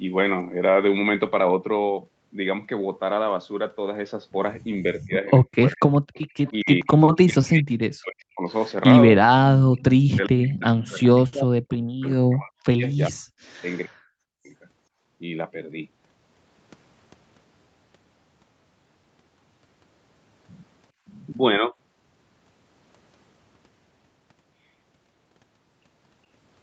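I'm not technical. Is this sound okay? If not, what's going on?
No. In several places the talker's speech suddenly sinks, thins out or breaks into pieces: from 4.82 to 5.84 s, 6.5 to 6.9 s, 7.28 to 8.44 s, a long stretch from 9.79 to 14.52 s, and a slight dip from 21.59 to 21.74 s. This is speech suppressed in double talk. It likely happened because both people spoke at once, and the call's echo-removal system couldn't tell this talker apart from the echo of the other person, so it turned everything down.

There is also a faint, delayed repeat of the voice, arriving about 0.4 seconds late, from 5.87 to 6.52 s, 7.07 to 7.12 s and 11.72 to 11.77 s. This is an echo leak. The likely cause is a loudspeaker on one end of the call. Its microphone picked up the sound, and that end's echo canceller didn't remove all of it, so a quiet copy was sent back.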